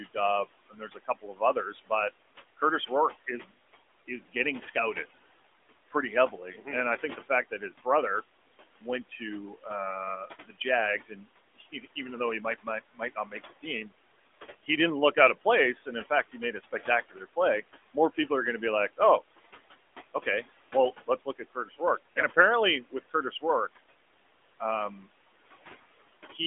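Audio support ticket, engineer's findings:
Noise suppressor artifacts, whole clip. Room noise sits about 16 dB under speech. The suppressor frame-gates it down about another 16 dB between phrases and lets it back up under speech, so the background pumps in and out. Narrowband line audible, 250 Hz to 3.5 kHz.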